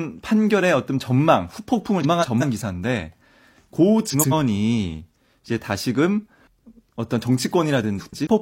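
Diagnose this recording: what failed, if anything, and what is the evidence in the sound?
The failure is in transport: frames out of order. Two neighbouring runs of frames arrived swapped, and the decoder played them as received. It shows up as a brief garbled flutter at 2.03 to 2.43 s, 4.10 to 4.33 s and 7.98 to 8.27 s. Each swapped half lasts 186, 93 and 139 ms respectively, which fits runs of four, two and three frames. No time is lost, so the overall timing stays intact.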